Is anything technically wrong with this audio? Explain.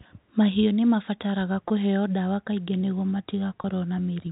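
Yes. Packet loss with pitch repetition occurs twice: at 1.68 s, between "nĩ mabataraga" and "ndawa kaingĩ nĩguo", and at 3.62 s, after "ndawa kaingĩ nĩguo". Each gap of about 20 ms, likely a single lost packet, is bridged by repeating the last pitch period, giving a brief held, buzzy sound. A waveform shows identical repeated cycles, and a spectrogram shows a short run of frozen harmonics. The G.711 telephone coding path limits the sound to below 4 kHz.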